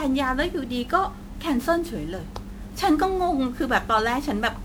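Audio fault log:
Throughout, generation loss: likely repeated MP3 re-encoding at 128 kbit/s, around ten passes, stacking quantisation noise into swirly, hollow speech with blurred attacks.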